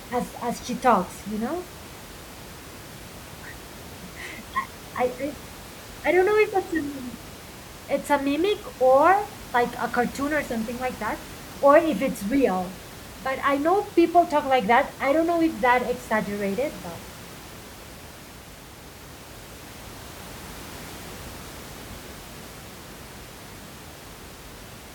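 The clip is speech, and nothing is technically wrong with it.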